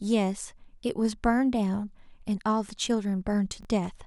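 Chunks out of order appear at 3.61 to 3.65 s. A block of about 21 ms arrived late and plays one chunk after the block that should follow it. Nothing is lost, but the three hard joins make a brief jumbled stutter.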